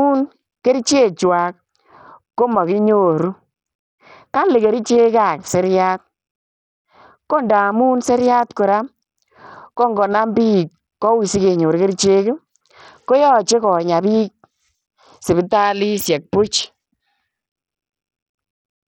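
Speech runs through heavy, likely Bluetooth SBC compression the whole way, with flickering, starved treble and gritty aliasing, pointing to a roughly 64 kbps stream, unlike a clean low-pass cutoff.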